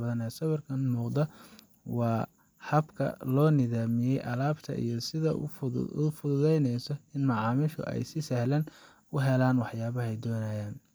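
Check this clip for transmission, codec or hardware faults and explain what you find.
No faults turn up on close listening to this speech recording. There is nothing to point to at any moment in it.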